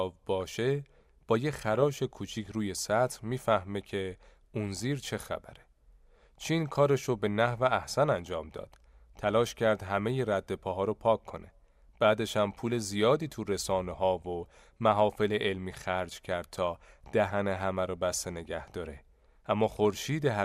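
From 0.41 to 0.56 s, weak digital radio reception let bit errors slip through the error correction into the MP2 data, at a rate on the order of one bit in a thousand. The result is DAB burbling: corrupted samples put short blips of noise into single sub-bands, and corrupted scale factors make individual sub-bands leap in level for up to a frame, so the speech briefly burbles. Seven frames were damaged within the span.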